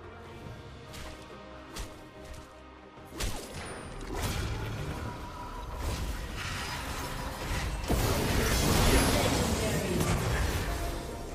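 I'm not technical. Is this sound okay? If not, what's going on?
No. At about 3.94 s there is a tiny skip where the sound jumps ahead. This is an overlap between stream segments: two 2-second chunks claimed the same moment, and the player cut a sliver of real sound. Unlike a dropout, there's no silent gap.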